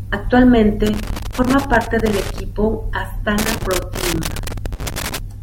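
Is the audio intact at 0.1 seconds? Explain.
Yes, at 0.1 seconds the speech is intact, with no dropout, click, distortion or other fault at that moment.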